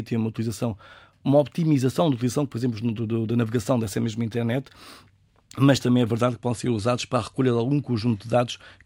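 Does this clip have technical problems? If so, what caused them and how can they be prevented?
Yes. From 0.0 to 6.2 s, up to "que podem ser usados", the speech shows imaging from linear upsampling. The audio was raised from 24 to 48 kHz by straight-line interpolation. That weak filter dulls the top of the band and leaves a faint mirrored copy between 12 and 24 kHz, roughly 35 dB down, heard as a light metallic shimmer on sibilants. Unlike aliasing, nothing folds down into the band; the extra content sits above 12 kHz. A proper windowed-sinc or polyphase resampler prevents this.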